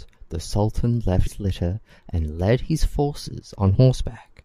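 At 1.26 to 1.28 s, just before "litter and led his", there is a brief disturbance from damaged data in the compressed stream. Corrupted bytes make the decoder misread the frames there, lose sync and hunt for the next valid frame header, so the speech gives way to a short glitch. On a spectrogram this shows as a narrow vertical break in the harmonic bands. The waveform shows a 20 ms patch of disrupted samples.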